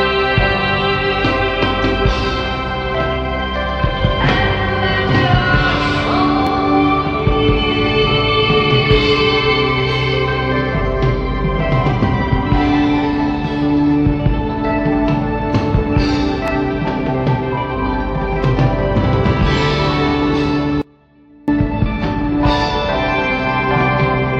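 At 6.47 s and again at 16.48 s there are overlapping chunks: each new 10-second block begins slightly before the previous one finished, so about 12 ms of audio plays twice. Each join gives a brief click or stutter, and the waveform shows a short repeated stretch with a small discontinuity at the seam.

From 20.82 to 21.48 s comes an audio dropout to a faint residue. The signal vanishes abruptly for about 660 ms, leaving only a faint trace of the sound at roughly 30 dB below its normal level, likely because the source was lost while the path after the break stayed live. On a spectrogram the band goes dim, not black, with hard edges at both ends.

From 21.62 s to the end the sound switches to an adaptive stream at a lower bitrate. The treble suddenly dulls, with coarser codec artefacts and no gap. The change fits a drop from about 96 to 32 kbit/s AAC. A spectrogram shows a flat ceiling, with nothing above 9.5 kHz.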